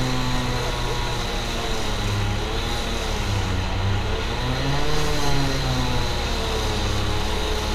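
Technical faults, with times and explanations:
No technical faults can be heard in this audio.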